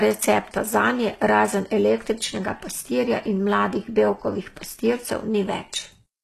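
Throughout the speech, the upper band sounds synthetic rather than recorded, with gritty, lispy s sounds and nothing above 12.3 kHz. This is likely HE-AAC compression at a bitrate around 16 kbps, rebuilding the treble by copying lower bands upward, so its harmonics misalign.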